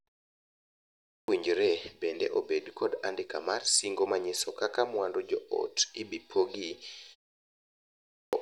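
Speech with a clipped start after a pause at 0.76–1.28 s and 7.81–8.33 s: the output device wakes late after roughly three-quarters of a second of silence, swallowing about half a second, unlike muted pauses, which lose nothing.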